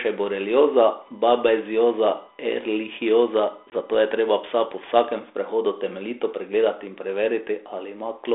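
A speech recording over what sounds like a 32 kbit/s G.726 ADPCM line, band-limited to roughly 300 Hz to 3.6 kHz. From 1.01 to 4.30 s, USB whine appears: current drawn in the bus's 1 ms frames leaks through power or ground into the audio path, producing a steady 1 kHz tone about 35 dB below the speech that stops just before "psa po vsakem sprehodu". At 3.70 to 3.73 s, packet loss on the ADPCM call drops what sounds like a single packet, about 20 ms of audio, and fills it with silence. The decoder's adaptive predictor and step size lose track of the sender's, so speech resumes after the sharp-edged gap slightly roughened before settling.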